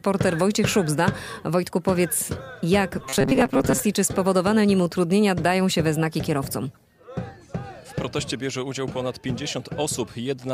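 From 2.99 to 3.80 s the sound becomes a rigid, metallic 134 Hz buzz, robotic sound likely from repeated short buffers, with roughly half the audio replaced by repeats.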